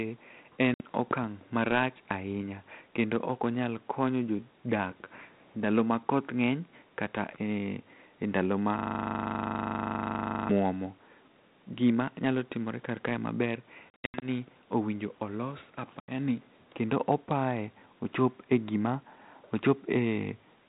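At 0.74 s a hard-edged gap of about 60 ms opens in the speech, and the sound returns slightly distorted: packet loss on an ADPCM call, where a few lost packets become silence and leave the decoder's adaptive predictor and step size out of step with the sender's until it resettles.

From 8.79 s to 10.49 s, right after "e ndalo", a 40 ms fragment repeats 43 times as a machine-gun stutter at 25 Hz. This is a system hang loop: the system froze while the sound hardware kept replaying one ring buffer.

After "timore karkae maber", from 13.9 s to 14.26 s, about 220 ms of audio drops out in scattered holes over 320 ms, the longest about 80 ms, with roughly ten packets lost. At 16.0 s, between "owinjo olos" and "ni kendo opaye", an 80 ms hole follows. Each gap ends in the same misadjusted, slightly distorted restart.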